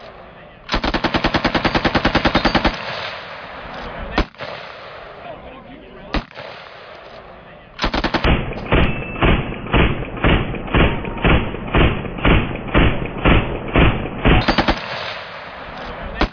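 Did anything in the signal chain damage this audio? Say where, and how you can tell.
No, no signal-chain damage heard.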